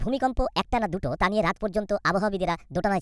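Speech that runs high and rushed from start to finish: a wrong sample rate. Everything plays 1.5 times too fast and about 7 semitones sharp, which fits 16 kHz material being played out at 24 kHz with no conversion, so speed and pitch rise together.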